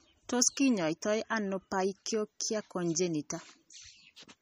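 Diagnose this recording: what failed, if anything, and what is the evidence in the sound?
MP3 compression damage runs throughout, a codec-stage fault. The speech has a watery, swirling texture and nothing above 15.3 kHz, which points to a lossy encoder likely starved of bits, at a rate that fits roughly 32 kbps. With so few bits, the encoder discards the top of the spectrum at a fixed cutoff and drops weak frequency lines that flicker in and out between frames, producing the plainly audible swirl and smeared consonant attacks.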